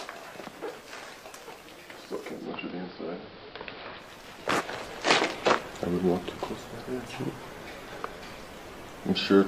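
From 2.33 to 4.13 s, digital radio blending to AM analogue after signal loss: hiss about 25 dB below the signal, level about 2 dB different.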